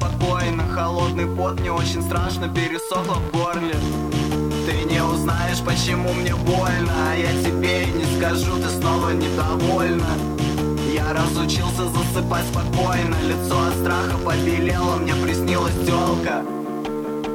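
Nothing stood out on listening to this audio.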